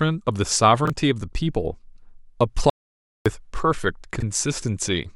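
Chunks out of order at 0.85–0.90 s and 4.16–4.22 s in this speech: a 21 ms block plays one, then two, chunks late, jumbling the sound. An audio dropout to silence runs from 2.70 to 3.26 s, cutting 0.56 s to silence with no room tone, likely from lost input while recording continued.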